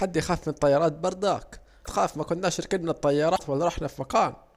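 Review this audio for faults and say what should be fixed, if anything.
Damaged data in a compressed stream at 1.81–1.87 s and again at 3.33–3.40 s: each is a short blip cutting across the speech. Bytes in the encoded stream were corrupted at these points, so the decoder misreads the frames there, loses its place in the bitstream, and briefly outputs garbage while it hunts for the next valid frame header. Use a transport or container with checksums and error detection, and verify file integrity after transfer.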